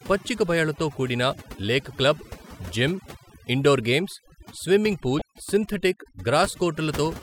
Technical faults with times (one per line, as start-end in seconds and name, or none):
0.00-7.23 overdone noise removal
5.19-5.22 damaged data in a compressed stream